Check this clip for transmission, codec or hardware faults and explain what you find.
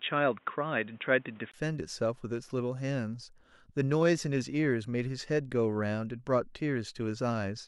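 One fault, at the start: from 0.0 to 1.54 s the speech is dull and boxy, with nothing above 3.8 kHz. It then opens up after a 20 ms gap, likely an input switched to a poorer device. The gap and the changed background noise, about 35 dB down at unchanged level, set it apart from a simple codec bandwidth drop.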